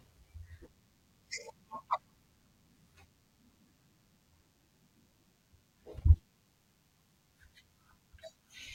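A nearby DECT cordless phone or base station is transmitting a short radio burst every 10 ms, and the recording chain is rectifying it into the audio path. Throughout this speech clip that produces DECT cordless phone buzz: a thin, steady 100 Hz buzz rich in harmonics, sitting faintly beneath the voice, roughly 40 dB down.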